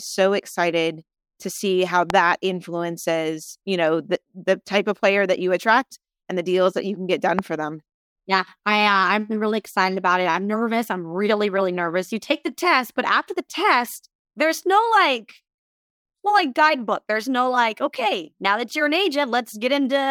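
At 2.10 s a loud pop cuts in, just after "excited to see how" and before "influences you know the". It is a single sharp crack, roughly 20 dB above the speech. At 7.39 s the same kind of pop returns, after "you can get done" and before "for them". Each is over in a moment. The speech runs on underneath. The likely cause is a brief voltage spike, from a switch, static or a driver glitch.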